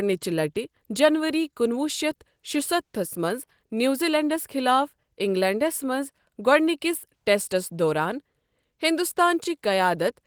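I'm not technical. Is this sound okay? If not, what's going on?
Yes, the speech sounds fine; nothing is going wrong.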